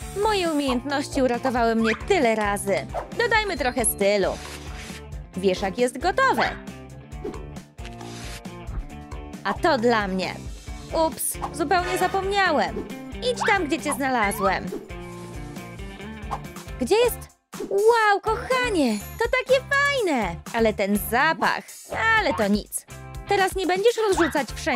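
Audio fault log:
No faults heard anywhere in the audio.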